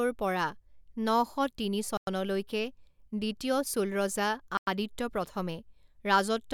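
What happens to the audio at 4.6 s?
Just after "চোল ৰজা", a gap between chunks opens from 4.57 to 4.67 s: 100 ms of hard-edged silence at a join between 2.5 s chunks. Unlike a dropout, nothing is missing; the speech stops and then resumes exactly where it left off.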